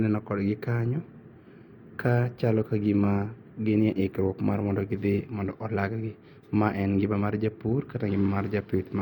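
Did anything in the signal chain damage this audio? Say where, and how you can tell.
No, nothing in the signal chain damaged this audio.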